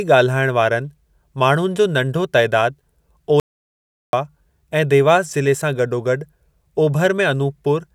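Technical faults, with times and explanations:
3.40–4.13 s, audio dropout to silence. The speech stops mid-flow at 3.40 s and resumes abruptly at 4.13 s. The gap lasts about 0.73 s. It is complete silence, with no room tone or background hiss underneath. The input was likely lost for that stretch, from a disconnected device, a failed link or a stray mute, while the recorder kept writing silence. Whatever was spoken during the gap is gone.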